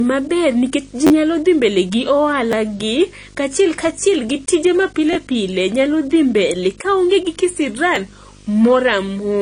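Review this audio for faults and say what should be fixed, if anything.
Video or display buzz: a screen or video cable is coupling into the audio path, laying a steady 50 Hz field-rate buzz with hash above it under the speech, about 20 dB down, throughout. Route audio cables away from displays and video leads, and fix the grounding between them.

AAC compression: a low-bitrate encode, likely AAC-LC around 32 kbps, removes everything above 10.2 kHz and leaves the speech dull, smeared and fizzy on sibilants throughout. Re-encode from the source at a higher bitrate, or keep a lossless master.

Repeated buffer: the playback device ran short of new audio and replayed its last block. Each repeat lasts about 10.7 ms, which fits a 512-sample buffer. The replays produce stutters and clicks at these points:
1.07–1.10 s, with three extra plays and roughly 30 ms lost, just before "nyalo dhi mbele gi".
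2.52 s, just after "nyalo dhi mbele gi".
5.13–5.15 s, with two extra plays between "kaachiel kachiel gi tije" and "pile nyalo dhi mbele".
7.96 s.
Use a larger buffer or reduce system load so the audio is always delivered on time.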